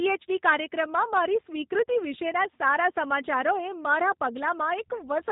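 The speech has been carried through a G.729 codec from start to finish, a low-rate VoIP coder whose sound fits about 8 kbit/s. It rebuilds each frame from a vocal tract model and a few pulses, so nothing above 4 kHz survives and the voice comes out plainly rough and synthetic.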